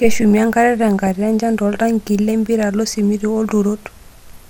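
Across the whole speech clip the sound is dull and grainy with a gurgling edge, most likely MP2 compression at a rate that fits about 80 kbps. Starved of bits, the upper sub-bands drop out and flicker. Unlike the later burst, this damage never lets up.

From 0.99 to 1.07 s a brief burst of burbling breaks over the speech. This is DAB burbling. A small fraction of bit errors, well under one percent, slipped past error correction and put short blips of noise into single sub-bands, which explains the burst's sudden onset and short, blipping character.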